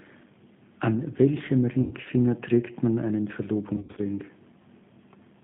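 Throughout, the speech carries G.729 codec damage, plainly audible: the line is confined to roughly 150 Hz to 3.5 kHz, and the voice sounds slightly rough and synthetic. At 8 kbit/s the codec rebuilds each frame from a vocal tract filter, a pitch predictor and a few coded pulses, so fine spectral detail is replaced by a modelled approximation, which fits the G.729A variant.

From 1.81 to 1.95 s, VoIP packet loss concealed by the speech codec takes out about 100 ms of audio, five packets in all. The decoder extends its last pitch and filter state with decaying gain, so the sound turns into a fading buzzy tone or coloured noise.

From 3.77 to 4.01 s, a second loss covers about 140 ms, scattered over 200 ms with a longest run of 80 ms. The repeated extrapolation fills the gaps with stretched sound. Because each frame depends on the previous state, the degradation persists briefly after good packets resume.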